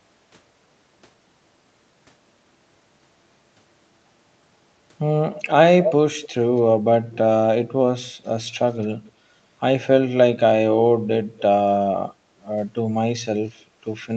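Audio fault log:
5.33–5.44, 5.82–5.94, 6.22–6.28, 8.82–8.87 and 13.48–13.52 s, echo leak: short delayed copies of the speech return about 0.26–0.28 s late, one near full level and the rest well below it, likely from residual loudspeaker pickup that the far end's echo canceller missed.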